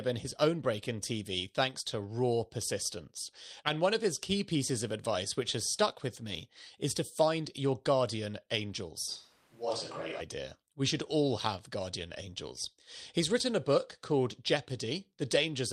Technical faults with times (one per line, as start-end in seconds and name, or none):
9.09-10.19 switch to a distant microphone